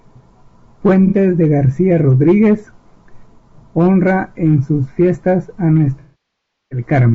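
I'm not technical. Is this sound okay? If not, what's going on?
No. The whole clip has a rough, grainy edge to the voice, with a fake-sounding top end. That's most likely low-delay AAC compression, the kind video calls use.

There are also two spots of AAC frame loss with concealment, where bits of audio went missing and the player guessed. Around 1.07 to 1.15 s it's a brief smeared blip. From 5.99 to 6.82 s, right after "en sus fiestas a", nearly a second fades toward silence and then comes back.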